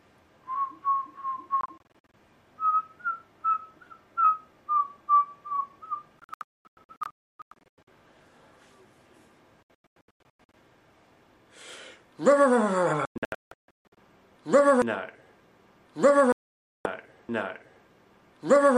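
Digital broadcast dropouts at 1.61–2.14, 6.19–7.88, 9.63–10.54, 13.07–13.98 and 16.32–16.86 s: the receiver kept losing frames and muting. The sound breaks into short silent holes, with runs up to 288 ms near 6.2 s, consistent with 24 ms frames. The missing audio never returns.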